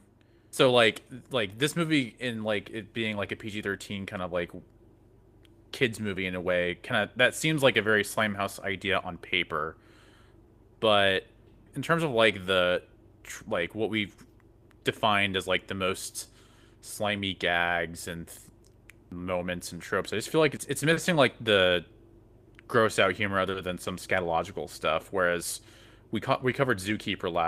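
From the start of this speech clip, clock drift between sender and receiver is at work: the sender's clock runs slow by about 2 percent, so audio arrives a little too slowly and the receiver's jitter buffer keeps drifting toward empty. Nothing in the waveform marks the drift itself. It shows up only through the fixes the receiver has to make, which fall unevenly across the whole clip.

From 0.36 s to 20.40 s come repeated timing corrections. The receiver keeps duplicating short slices of sound to make up for the slow supply, playing the material at about 98 percent speed and adding roughly half a second in total. Each repeat is tiny, heard as a faint hiccup or a slightly dragging, uneven pace. On a waveform, small repeated segments sit at irregular spacing. On a spectrogram, brief smeared or doubled columns interrupt otherwise continuous harmonics.

At 20.93 s to 21.00 s and again at 23.51 s to 23.58 s, a short stall from a late packet occurs. 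Each time the buffer ran dry, the receiver stretched the last sound by 40 ms until the packet arrived, then resumed without losing anything. The result is a momentarily held tone with a slight buzz or dip. A spectrogram shows horizontal, frozen bands over that span, and the waveform shows a briefly periodic, repeated stretch.

From 25.30 s to 27.47 s the repeated timing corrections return at about 97 percent speed, adding roughly 70 ms. The same small duplicated slices bring back the faint stutter and unsteady tempo, and the same scattered repeats appear in the waveform.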